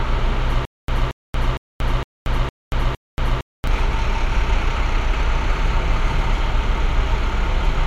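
From 0.65 to 3.67 s there is a stutter with silent gaps, most likely from the player or stream stalling and, on each retry, replaying the last buffered fragment before running dry. The result is a burst of about 227 ms that repeats 6 times, each followed by roughly 232 ms of dead digital silence, so the pattern recurs every 459 ms at a steady pace. Whatever sound belonged in that stretch never plays.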